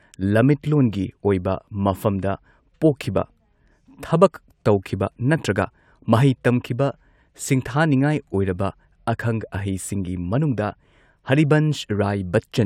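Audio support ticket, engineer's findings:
No faults found on playback.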